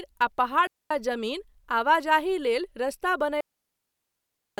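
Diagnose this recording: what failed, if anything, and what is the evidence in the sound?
Digital wireless dropout in the radio link: near-silent holes at 0.67–0.91 s and 3.41–4.58 s after "लेल रस्ता", where the receiver mutes lost data. There is no noise burst, unlike an analogue dropout.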